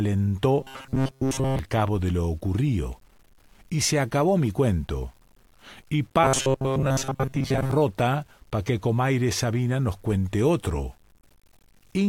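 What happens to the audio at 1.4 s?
At 1.4 s the speech has turned into a rigid, metallic buzz pitched around 133 Hz that only loosely tracks the syllables, lasting from 0.61 to 1.59 s, just before "cabo de lo ocurrido". This is robotic sound from repeated short buffers, likely caused by audio arriving too seldom and playback looping the last chunk of roughly 7.5 ms. Most of the real audio is skipped in this stretch.

Underneath, quiet detail sounds grainy, with a gritty distortion that rises and falls with the speech and sits roughly 40 dB below it. This points to low bit depth without dither, likely from the audio being truncated to about 9 bits, so the rounding error follows the signal instead of forming a steady hiss.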